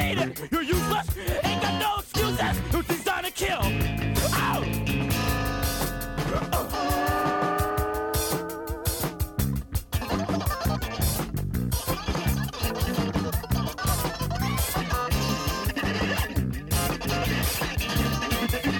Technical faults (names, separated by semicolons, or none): none